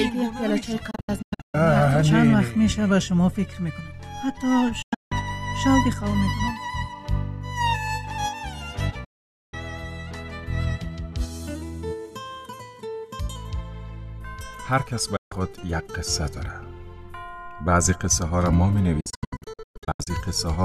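The sound repeatedly cuts out in short muted holes, each entered and left with a very quick fade of about 8 ms: at 0.91–1.55 s as scattered gaps, at 4.82–5.12 s, at 9.04–9.54 s as one solid silence, briefly at 15.16–15.32 s, and at 19.00–20.07 s as a broken string of gaps. This is digital broadcast dropout: the receiver muted whenever frames arrived corrupt or missing, so that audio is simply gone. The gap lengths fit frames of roughly 24 ms each.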